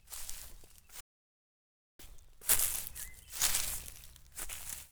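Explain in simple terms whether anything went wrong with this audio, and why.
Something in the recording chain most likely lost its input for a moment, perhaps a loose connection or a brief mute, while the recorder kept running and filled the gap with nothing. This is an audio dropout to silence. From 1.01 s to 1.99 s the sound stops abruptly and then resumes just as suddenly. For almost a full second there is dead, total silence, with no faint background hiss at all, and whatever happened during that stretch is simply missing.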